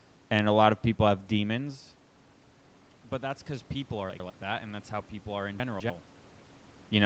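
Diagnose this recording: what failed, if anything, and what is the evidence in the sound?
From 3.2 to 6.09 s, speech and room noise swell together by about 5 dB. This is automatic gain rising in call processing after the input dropped about 11 dB.

Garbled moments at 4.1 to 4.3 s and 5.6 to 5.9 s point to chunks out of order in the buffer: 100 ms blocks play one and two chunks late.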